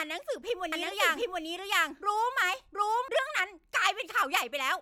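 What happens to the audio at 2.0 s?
At 2.0 s the speech is heard twice. A doubled audio track runs from 0.72 s to 3.08 s. A second full-band copy trails the original by roughly 0.7 s. It is about as loud as the first. The likely cause is the same signal reaching the mix a second time through a slower path. The copy has no decay or room colour. It cuts in and out abruptly at both ends.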